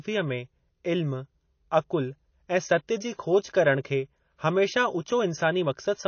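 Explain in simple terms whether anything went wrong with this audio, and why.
MP3 compression, throughout: the speech sounds dull and watery, with nothing above 6.6 kHz, likely because the encoder ran short of bits and discarded treble and faint detail.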